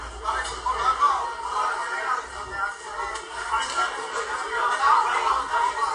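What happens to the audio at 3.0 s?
At 3.04 s, the stream most likely lost about a single sample, so the waveform jumps straight from one value to a later one. That is a case of dropped samples, far too brief to remove any sound, and it is heard as one sharp click.

Across the same moment, as everywhere in the clip, the audio likely passed through AAC compression at a low bitrate, which fits roughly 32 kbps AAC-LC. The encoder lowers its cut-off and coarsely quantises what remains, leaving the sound dull and smeared with a plainly audible warbling, fizzy texture.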